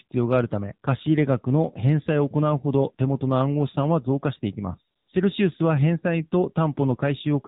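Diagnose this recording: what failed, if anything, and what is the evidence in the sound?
The codec stage failed: the whole clip passes through the AMR narrowband mobile codec, with a hard ceiling at 4 kHz and buzzy, synthetic-sounding speech. The plainly audible damage fits a low AMR-NB mode of about 7.4 kbps. A spectrogram would show empty bands above 4 kHz and smeared harmonics.

A call-processing failure inserts AMR comfort noise from 4.96 to 5.08 s. For about 120 ms no speech frames arrive, so the receiver substitutes smooth synthetic noise for the real background. On the waveform this looks like a flat, featureless patch. On the spectrogram it shows as an even wash with no speech structure.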